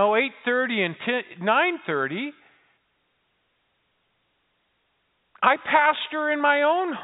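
No technical faults can be heard in the speech, which carries the narrow telephone band of G.711 coding with nothing above 4 kHz and at most a faint quantisation hiss that rises and falls with the level.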